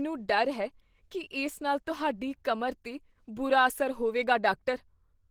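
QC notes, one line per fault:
Throughout, Opus compression: the speech is plainly grainy, rough and hoarse, with upper bands filled by noise instead of swirling holes. This likely comes from Opus running in its hybrid speech mode, fitting roughly 16 kbps, with content still reaching about 20.2 kHz.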